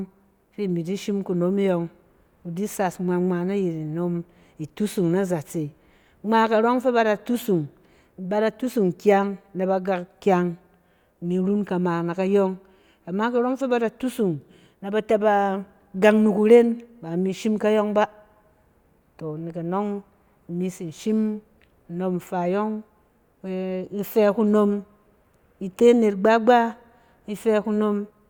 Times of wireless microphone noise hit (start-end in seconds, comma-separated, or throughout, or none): none